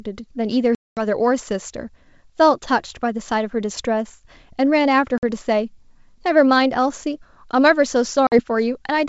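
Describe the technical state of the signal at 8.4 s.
At 8.4 s the signal is just coming out of packet loss on an ADPCM call, spanning 8.27 to 8.40 s. About 50 ms of audio is missing, which fits a handful of lost packets. The gap was filled with silence, leaving a hard-edged hole. The decoder's adaptive predictor and step size lost track of the sender's. So the speech resumes with brief, slight distortion, then settles within tens of milliseconds.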